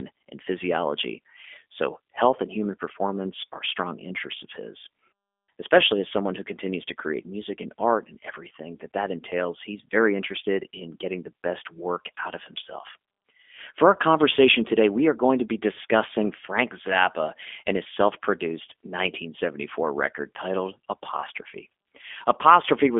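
Throughout, G.729 coding leaves the speech rough and synthetic, with nothing above 3.7 kHz. Unlike plain band-limiting, the buzzy pulse-rebuilt texture fits an 8 kbit/s codec.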